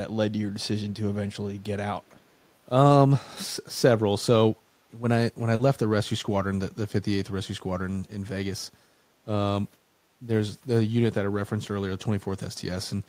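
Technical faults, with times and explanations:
2.43–2.49 s, echo leak: a very faint delayed copy of the speech, roughly 40 dB below it, trails the original by about 458 ms. This is likely the far end's loudspeaker output reaching its microphone and slipping past an incompletely converged echo canceller.
5.55–5.61 s, short concealed packet loss: about 40 ms of audio failed to arrive, and the decoder bridged the hole by extending the preceding sound, from its pitch if voiced or as shaped noise if not, then crossfading back. This gives a brief smear or wobble.
5.59–5.61 s, lost packet rebuilt from error correction: the final 20 ms of that stretch, consistent with a single packet, was recovered from a low-bitrate redundant copy in the next packet. It plays without a gap but sounds rougher and noisier than the surrounding frames.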